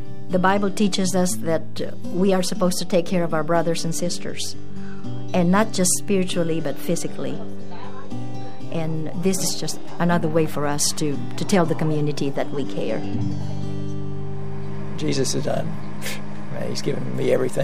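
DC offset runs through the whole clip, from the first sample to the last. The entire waveform sits displaced from zero by a constant amount, about -22 dBFS. The shift itself is inaudible, but it eats into headroom on one side of the waveform. In the spectrum it appears as a steady component at 0 Hz, below anything the ear registers.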